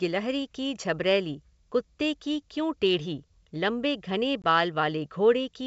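Just after "क्यों टेढ़ी लम्बे घने", from 4.42 to 4.45 s, the speech drops into a hard-edged silent hole and then comes back slightly distorted before settling. This is packet loss on an ADPCM call: about 20 ms of audio went missing, which fits a single lost packet, and the G.722 decoder's adaptive predictor and step size lost track of the sender's until they resynchronised.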